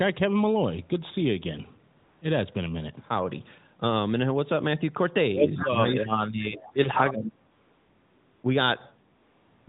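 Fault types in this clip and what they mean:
AMR comfort noise: Real background is replaced by smooth synthetic hiss at 1.98–2.22, 7.52–8.44 and 9.16–9.68 s, shown as a flat, structureless band switching abruptly on and off.
Echo leak: A delayed copy, roughly 0.2 s late and about 10 dB down, likely slips past echo cancelling at 5.57–5.69 s, appearing as repeated harmonics.
Speech suppressed in double talk: The voice drops by around 25 dB at 5.62–6.77 s and 20 dB at 6.95–7.38 s, likely from overlapping talk, showing sudden waveform envelope dips.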